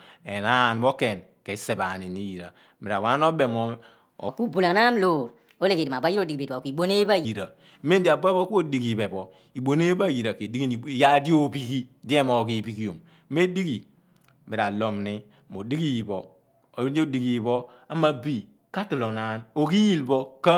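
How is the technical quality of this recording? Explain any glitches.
There's one real glitch. From 4.29 to 7.25 s a section at the wrong speed runs about 1.29 times fast, so the speech jumps roughly four semitones higher and sounds hurried, likely from playback against a mismatched clock.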